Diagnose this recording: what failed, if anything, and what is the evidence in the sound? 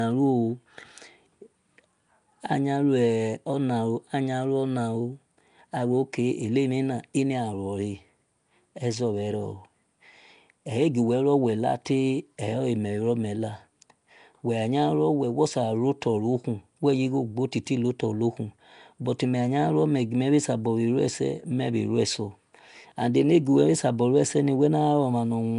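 The failure sits at the codec stage, and it runs through the whole clip. The speech carries a rough, hissy halo and a smeared, underwater character. Nothing is present above about 10.6 kHz. Quiet spectral bands sound noise-filled rather than resolved. This is likely Nellymoser compression, with damage plainly audible and a bitrate that fits around 44 kbps. The codec spends a fixed two bits per sample in short blocks. Weak bands get no bits and are replaced with noise.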